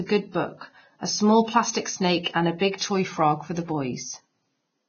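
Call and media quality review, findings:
Speech throughout hissy and grainy, treble roughened, nothing above 6.6 kHz. Likely Vorbis compression, with heavy damage that fits a bitrate near 17 kbps. Coarse residue quantisation turns fine treble detail into noise of matching energy. Unlike a plain low-pass filter, the band below the cut-off also sounds rough and noisy.

Pre-echo at 2.23–2.26 s (27 ms) just before "and a", and at 2.59–2.61 s (20 ms) between "and a" and "toy frog for". Short hiss precedes each onset and the attacks sound smeared. Block-spread quantisation noise fills the quiet gap before a late transient. Unlike a click or dropout, it sits before the onset rather than on it.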